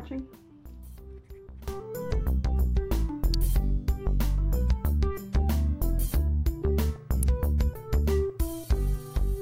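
Two quick snaps sit on top of the audio, one at 3.34 s and another at 7.23 s, each over in a few milliseconds and peaking somewhere around -15 dBFS. They read as an electrical switching spike, most likely a nearby switch, motor or static discharge arcing briefly and the audio line picking up that burst of interference. Each one is a tiny added transient rather than anything wrong with the underlying sound itself.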